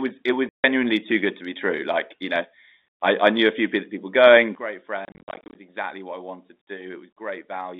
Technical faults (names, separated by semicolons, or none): packet loss filled with silence; sudden gain jump